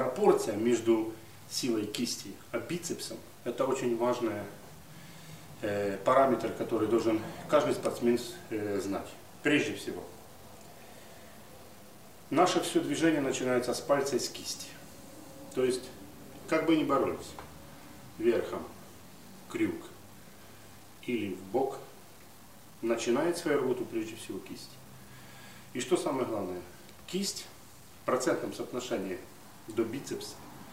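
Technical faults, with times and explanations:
Throughout, low bit depth without dither: gritty, grainy distortion tracks the sound, quiet parts sputter, noise about 30 dB down, likely 8-bit truncation without dither.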